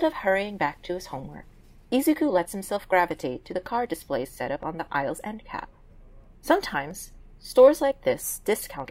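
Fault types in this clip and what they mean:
Dropped samples: three single sharp clicks sound at 3.86 s, 6.91 s and 7.75 s, each showing as a thin vertical line across the spectrum. Each is likely a tiny gap in the sample stream, well under a millisecond of audio, so the waveform steps abruptly from one value to a later one instead of continuing smoothly. The gap is far too short to remove any audible sound. Only the step itself is heard.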